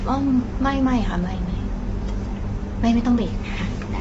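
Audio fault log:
throughout, low-delay AAC compression: rough, grainy speech with noise between harmonics and nothing above 7.8 kHz; likely short-frame AAC-ELD near 24 kbps, grainier than plain band-limiting.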